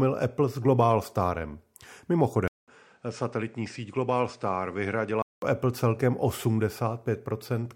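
An input switched to a poorer device from 2.48 s to 5.42 s: after a 200 ms silence at the switch, the speech loses everything above 9.3 kHz, turning duller and boxier, drops somewhat in level, and picks up a fresh background noise sitting roughly 40 dB below the voice. This pattern most likely comes from the recording path changing to a narrower-band microphone or headset mode, with its own tone and noise floor, before the original input returns at 5.42 s.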